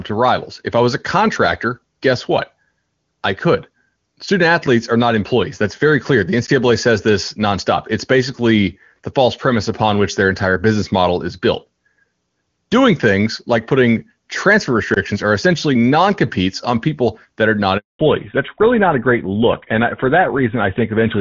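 At 6.47 s, just before "says this nonstop", the signal drops to digital silence for about 14 ms. A block of digital silence like this usually means the output buffer was not filled in time and zeros were played instead. Both edges of the hole are hard cuts with no fade, so it is heard as a single sharp tick.

The second block of digital silence runs from 14.94 to 14.96 s, between "things like putting transfer" and "are essentially non competes". It lasts about 21 ms, which fits a 1024-sample buffer going unfilled. Because it is longer than the first, it registers as a brief dropout with abrupt edges.

From 17.77 to 17.99 s, right after "people that are not", there is a handover gap of 220 ms. The call is being moved between networks, and during the switch no speech frames arrive. The sound decays over a few tens of milliseconds, then stays silent until the new link starts. Whatever was said in that interval is lost.

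From 17.99 s to the end, the audio has a fallback to narrowband. Before this point the AMR wideband (HD Voice) codec carries clear wideband speech. Afterwards nothing above 4 kHz remains, and the sound turns duller and rougher. The character of the sound points to a drop to GSM full rate at 13 kbit/s. Sibilants lose their crispness, and the voice takes on the boxy quality of an older phone line.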